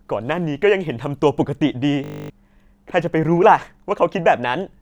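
A steady 50 Hz buzz replaces the speech from 2.04 to 2.3 s: a system hang loop, where a frozen system replays one 20 ms buffer thirteen times, losing about a third of a second.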